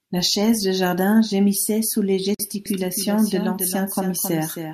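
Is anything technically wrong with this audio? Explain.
Yes, there are two faults in this speech clip.

At 2.35 to 2.39 s, right after "jardin gémissait sous les", a gap at a join of encoded pieces cuts in. Separately encoded segments were butted together with their encoder delay and end padding left in, leaving 48.5 ms of silence with smeared edges. A spectrogram shows a thin blank vertical stripe across every frequency.

From 2.66 s to the end, a doubled audio track appears: a full-band copy of the speech trails about 300 ms behind, roughly 10 dB quieter, with no reverberant tail. It likely comes from a second, slower capture path. It starts abruptly, and the spectrogram shows a fainter, time-shifted replica of each syllable's pattern.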